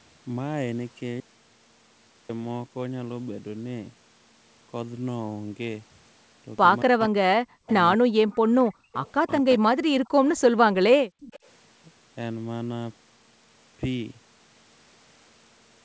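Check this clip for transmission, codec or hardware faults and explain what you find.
Four kinds of fault show up in this speech. The band stops at 8 kHz, which fits a G.722 call path.

Audio dropout to silence, 1.20 to 2.29 s: the input was likely lost briefly, and silence filled the 1.09 s gap. The speech cuts to dead silence with no room tone.

Speech suppressed in double talk, 6.86 to 8.30 s and 9.23 to 9.69 s: the echo canceller likely mistook overlapping talk for echo. It pulled the voice down by roughly 40 dB, so the voice dips and breaks up.

Echo leak at 7.69 s, 8.33 to 9.11 s, 10.05 to 10.37 s and 11.22 to 11.39 s: residual loudspeaker pickup was likely sent back uncancelled. It sounds like a faint copy trailing by 235 ms, about 25 dB below the speech.

Background gated by the echo canceller, 8.71 to 8.93 s and 11.07 to 11.22 s: the canceller clamped the microphone hard, by about 36 and 40 dB. 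The room sound drops out momentarily, then returns.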